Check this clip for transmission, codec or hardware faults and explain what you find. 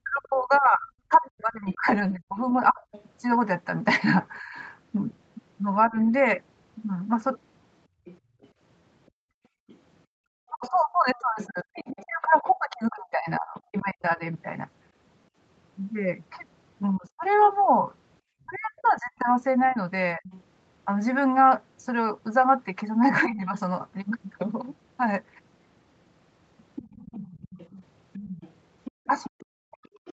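Yes, there are echo-canceller problems through most of the clip. The talker gets squashed whenever the far end is also talking, the far-end voice bleeds back in, and the room sound gets clamped a couple of times. The band tops out at 8 kHz, which fits a wideband Opus call at a modest bitrate.

Speech suppressed in double talk shows up from 0.03 to 5.96 s, 10.5 to 20.25 s, briefly at 23.26 to 23.53 s, and from 27.74 s to the end. The likely cause is the canceller mistaking the talker for loudspeaker echo while both sides overlap, so it pulls everything down. The voice dips hard, by something like 35 to 40 dB at worst, though only about 15 dB in that short blip at 23.3 s.

The other side's voice leaking through runs from 0.55 to 13.83 s, 18.54 to 23.25 s, and 26.75 s to the end. This is likely residual loudspeaker echo the canceller didn't fully remove from the mic. You can hear a second, quieter voice underneath, roughly 25 dB below the talker, and closer to 20 dB down in that last stretch, so it's more noticeable there.

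Background gated by the echo canceller hits from 7.88 to 10.22 s, about a second of it in total, and again for a short moment around 28.91 to 29.06 s. While the loudspeaker is active, the canceller clamps the mic down, by about 37 dB here. The room tone drops out and then comes back once the canceller releases, which gives a hole-in-the-background feel.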